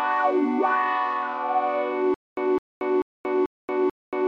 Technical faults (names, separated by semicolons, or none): stutter with silent gaps